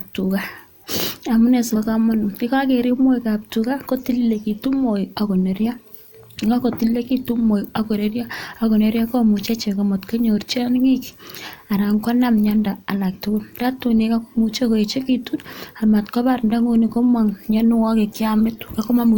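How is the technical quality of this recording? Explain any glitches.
The speech has two short dropouts of the same kind, both compressed frames skipped. At 1.75 s and again at 13.59 to 13.62 s, the decoder lost whole compressed frames, which fits a 20 ms frame length. About 70 ms of audio vanishes at the first point and roughly 150 ms at the second, so the speech jumps forward.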